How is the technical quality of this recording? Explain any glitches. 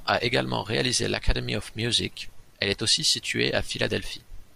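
No glitches or technical faults can be heard anywhere in this speech recording. Nothing in it drops out, clicks or breaks up.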